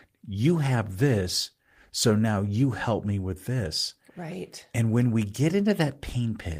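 No technical faults can be heard anywhere in this recording.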